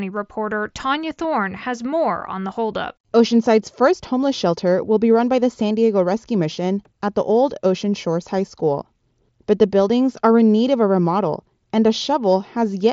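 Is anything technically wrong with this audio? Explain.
Yes. At 3.07 s, just after "more on the holdup", there is concealed Bluetooth headset packet loss. Voice packets between headset and phone never arrived, so the receiver patched about 22.5 ms (which fits three lost frames) with a copy of the closest-matching recent waveform. The result is a brief buzzy tone held at full level, with a small warble where real audio returns. The link itself runs through the wideband mSBC headset codec, which limits the sound to 8 kHz.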